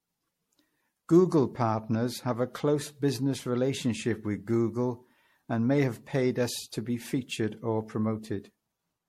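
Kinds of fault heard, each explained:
Generation loss: the speech sounds swirly, hollow and smeared, with blurred consonant onsets and nothing above 16.5 kHz, worse than one pass at around 64 kbit/s MP3 would give, likely from roughly seven repeated lossy re-encodes stacking fresh quantisation damage.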